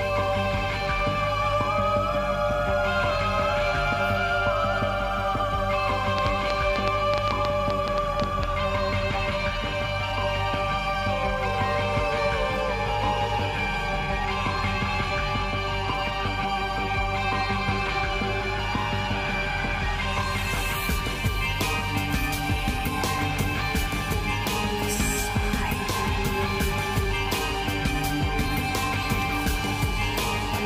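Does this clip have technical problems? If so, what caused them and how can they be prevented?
Yes. A train of clicks runs from 6.18 to 8.44 s: around fifteen sharp, similar pulses at roughly 6.7 per second, unevenly spaced, standing well above the sound, likely from electrical interference or a faulty connection or power supply. To prevent this, keep phones and other equipment away from cables, and use a stable, well-grounded interface.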